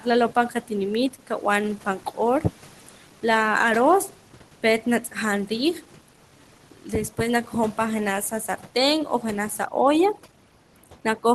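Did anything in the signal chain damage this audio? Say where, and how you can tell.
Yes. The call-processing noise suppressor clipped speech at 0.0–0.71, 1.1–1.44, 1.77–3.24, 4.09–5.16, 5.47–7.78 and 8.31–8.76 s, the last between "pan jenaj" and "o janaj sa". Soft endings dip about 12 dB (about 9 dB finally) and sound swallowed, because the suppressor mistook them for noise.

From 9.65 s to the end, after "o janaj sa", overdone noise removal takes over. The background drops and breaks up into twinkling specks. The suppressor is zeroing individual frequency bands that sit near its noise estimate.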